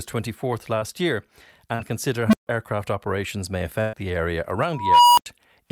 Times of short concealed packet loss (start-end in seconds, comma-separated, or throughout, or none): 0.79-0.83, 1.75-1.81